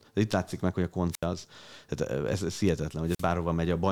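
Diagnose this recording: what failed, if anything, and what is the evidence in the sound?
The failure is in the analogue radio link of a wireless microphone, ahead of any digital stage: twice the received FM signal faded far enough that the receiver's squelch cut its output, a wireless microphone squelch dropout. In this speech clip, a burst of hiss leads into a hole of near silence, about 77 ms long within 1.11 to 1.24 s and about 47 ms within 3.05 to 3.28 s, before the signal returns.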